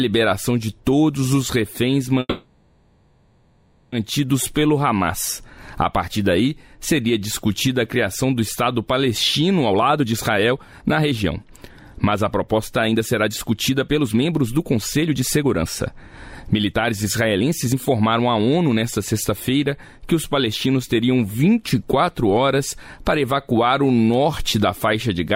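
From 2.19 to 3.94 s the audio stalls for about 1.73 s. The last sound carries on as a fading buzz or hiss. Then the audio resumes where it stopped, with nothing lost. This is a call audio freeze, likely from delayed packets draining the jitter buffer.

From 9.70 to 19.31 s a jitter buffer speed-up follows. The audio runs at 118% speed with unchanged pitch and sounds hurried. The receiver cuts many short pitch-period slices, about one and a half seconds in total, to shrink the built-up delay.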